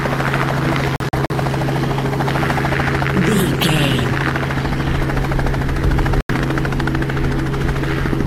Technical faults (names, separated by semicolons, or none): digital broadcast dropout